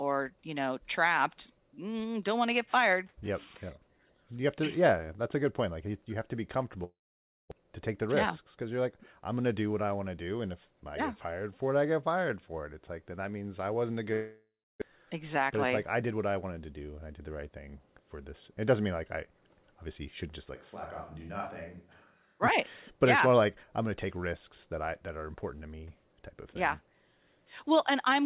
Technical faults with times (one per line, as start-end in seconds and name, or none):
6.84-7.53 long network dropout
7.61-8.71 jitter buffer speed-up
14.13-14.84 long network dropout
14.92-16.13 jitter buffer speed-up
20.57-22.41 switch to a distant microphone